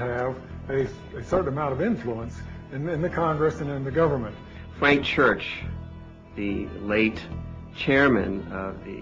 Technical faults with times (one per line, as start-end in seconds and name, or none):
0.63-1.40 DAB burbling
4.72-5.62 DAB burbling